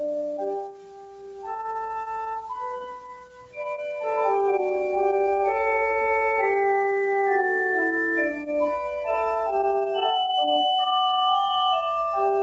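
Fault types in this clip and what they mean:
Noise suppressor applied to music or sounds: a speech-tuned suppressor stays active across the whole clip, treating sustained tones and decays as noise, so the level pumps by roughly 10 dB as attacks pass and held portions and tails are pulled down, leaving a thinned, fluttering character.
Sound cut by the noise suppressor: two stretches are judged to be noise and pushed down harder than the surrounding audio, from 0.55 to 1.72 s and from 2.81 to 3.61 s, each dipping by about 18 dB at its deepest, with sustained and fading material sinking while sharper onsets survive.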